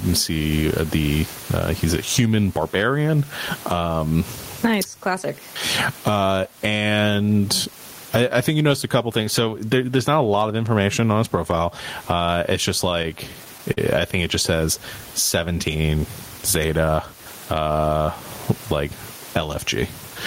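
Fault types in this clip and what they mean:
Gain pumping: The level breathes throughout. The room background sits about 37 dB below the speech, and the gain swings by around 20 dB. Loud and quiet passages sit unnaturally close together and the speech sounds squashed. This is likely a microphone gain set far too high, with a fast limiter or compressor clamping down on every peak.
Repeated stalls (stutter): Between 12.89 and 13.79 s, from just after "it's just" up to "I think it just", the playback hitches six times. At each hitch the receiver ran out of buffered audio because packets arrived late, and it stretched the last sound to cover the wait. Together the fills add up to about 95 ms, the longest 41 ms, or about 11% of that span. No audio is lost, but that passage drags and stutters.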